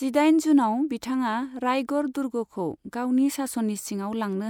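No technical faults occur at any point in the recording, so there are none to describe in time order.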